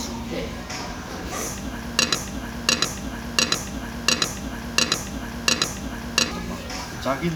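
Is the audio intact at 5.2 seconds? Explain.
No. At 5.2 seconds the audio is caught in a broken-record loop that runs from 2.15 to 6.31 s. A fragment of about 0.70 s plays back to back, six times, with no change, and whatever should have sounded during those four seconds is lost. The likely cause is a player, encoder or stream that stalled and kept resending the last piece it held. Unlike an echo, which decays and overlaps the original, each repeat here is identical and starts abruptly where the previous one ends.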